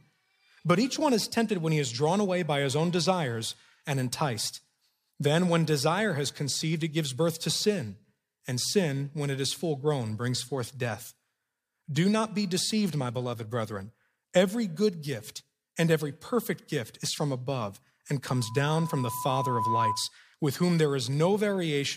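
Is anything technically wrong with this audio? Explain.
Yes. A loudspeaker feedback squeal runs from 18.33 to 20.11 s: the microphone re-captures its own speaker, and a 1 kHz tone swells over roughly a second and a half to about 5 dB above the audio.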